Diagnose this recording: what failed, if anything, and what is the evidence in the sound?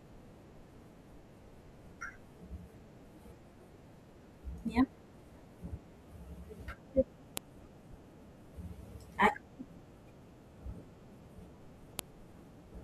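File header played as audio, at the storage and file-joining stage: the speech is interrupted by two sharp, loud snaps at 7.37 s and 11.99 s, each lasting no more than about a millisecond. Each marks a point where separate WAV pieces were concatenated without stripping the header, so those few dozen header bytes are read as samples. On a waveform each appears as a near-vertical spike unrelated to the surrounding signal. On a spectrogram it shows as a thin full-band vertical line.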